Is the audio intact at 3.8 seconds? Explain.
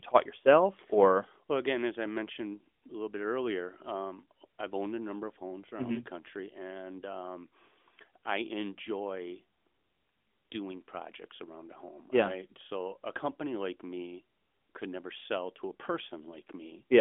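Yes, the audio is intact at 3.8 seconds, with no fault at that moment.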